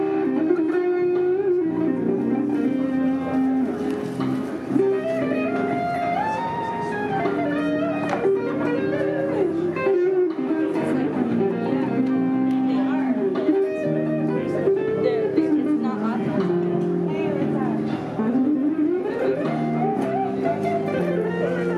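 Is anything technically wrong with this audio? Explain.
No, nothing technically wrong stands out in this audio. No fault can be heard at any point in it.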